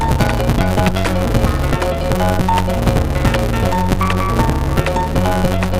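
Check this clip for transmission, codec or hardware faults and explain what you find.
One fault runs through the whole clip, a block size mismatch (truncated). From start to finish, one stage hands over longer blocks than the next stage reads, and the tail of every block is discarded. The cut falls at a steady 188 Hz, which fits a 256-sample read, so a buzz at that rate sits under everything. Because part of each block is lost, the audio plays 1.88 times too fast while keeping about its normal pitch.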